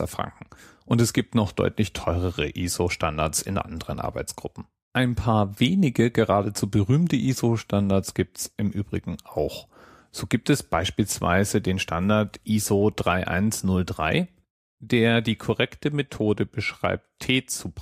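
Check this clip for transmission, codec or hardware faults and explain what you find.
Nothing wrong turns up on a listen here, as the speech just rolls along with no faults worth flagging.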